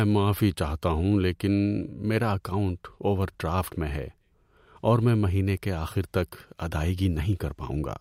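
Nothing stood out on listening to this speech recording.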